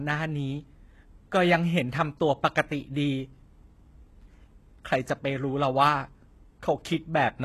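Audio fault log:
Throughout, HE-AAC compression: the treble of the speech is plainly gritty and metallic, s sounds turn lispy, and nothing remains above 12.3 kHz. This is likely spectral band replication rebuilding the top from copied lower bands, consistent with about 16 kbps.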